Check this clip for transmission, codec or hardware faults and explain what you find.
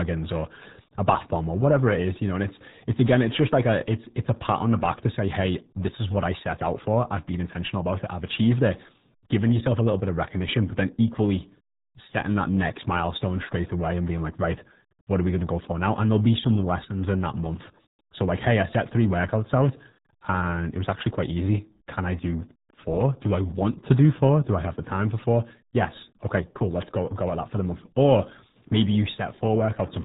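The clip has one codec fault, present from start to finish. Throughout, the speech carries heavy damage from the RealAudio 14.4 codec, consistent with RealAudio 1 coding at 8 kbit/s for dial-up modems. Nothing passes above 3.8 kHz, so a spectrogram shows a flat ceiling there. The coarse coding leaves the speech muffled and gargly.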